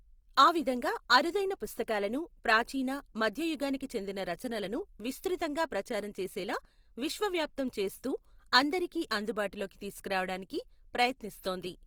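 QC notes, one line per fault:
Throughout, Opus compression: the speech takes on a grainy, rough texture rather than a swirling one, because the encoder keeps each band's energy but, short of bits, fills band detail by folding lower bands or injecting noise, so few spectral holes appear. The damage is plainly audible, which fits a rate around 24 kbps in music (CELT) mode. Bandwidth stays full, with content reaching about 20.2 kHz. This is likely Opus coding.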